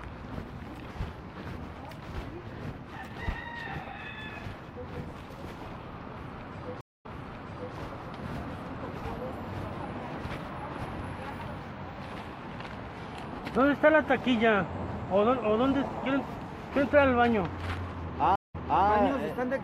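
Two stream reconnect faults break the audio. At 6.81 s the sound drops out for about 0.24 s. It then resumes 0.71 s earlier than where it stopped, so a stretch is heard twice, up to 7.75 s. At 18.36 s a 0.18 s gap follows, and the audio picks up 0.31 s back, through 18.85 s. Each time the connection broke, the player went quiet and reconnected. The server resent a burst of recent audio to a freshly started decoder.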